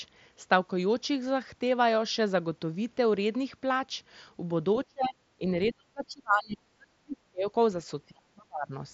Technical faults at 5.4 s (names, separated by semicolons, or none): speech suppressed in double talk